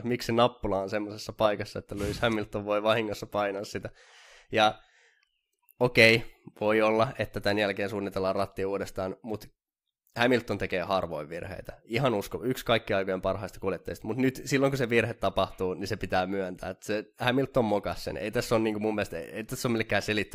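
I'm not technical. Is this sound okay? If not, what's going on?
Yes, this sound is okay, and nothing is going wrong with it.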